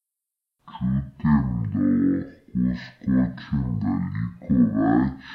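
From the very start the whole clip has the stereo read as mono problem. The left and right samples got strung together as one channel, so the speech crawls at half speed, sits a full octave low, and carries a faint mirrored copy up in the top half of the spectrum.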